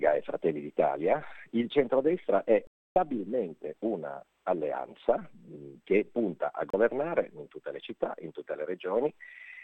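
Digital broadcast dropouts at 2.67 s and 6.70 s: the receiver lost valid frames and muted until good ones returned. The first leaves a 288 ms hole, fitting about nine 32 ms frames. The second is a brief 32 ms gap, consistent with one frame.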